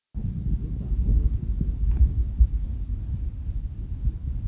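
No technical faults can be heard anywhere here.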